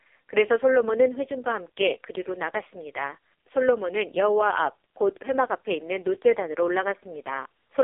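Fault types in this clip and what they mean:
AMR narrowband mobile codec: speech squeezed through the 2G/3G mobile speech coder at its lowest rate, leaving heavy, buzzy, synthetic damage that fits the 4.75 kbps mode. A spectrogram shows energy only between 300 Hz and 3.5 kHz, empty above, with smeared harmonics.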